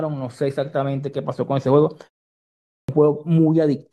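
At 2.53 s, after a pause of about 0.5 s, the speech resumes with a clipped start: the playback device had gone idle in the silence and needed about 0.36 s to wake, so the opening sounds up to 2.89 s are swallowed and speech begins abruptly.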